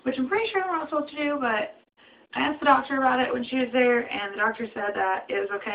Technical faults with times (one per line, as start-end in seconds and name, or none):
none